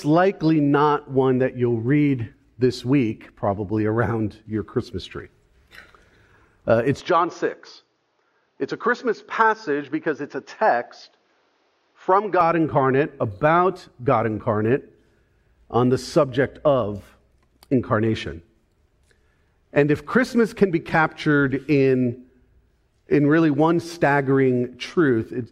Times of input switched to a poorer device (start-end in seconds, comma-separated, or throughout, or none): 7.00-12.41